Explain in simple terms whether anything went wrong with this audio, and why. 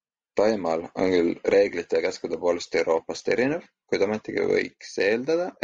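Throughout this speech, the voice sounds rough and grainy, with a hiss between the tones and a thin, artificial top end. That points to low-delay AAC compression, likely the kind video calls use. Its short frames struggle to capture voice detail.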